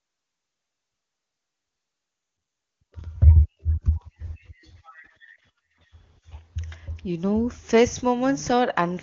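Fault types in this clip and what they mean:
The speech shows no faults and carries the band-limited character of AMR wideband (HD Voice) coding, with nothing above about 7.2 kHz and at most a faint coding texture, which points to the codec's top rate of 23.85 kbit/s.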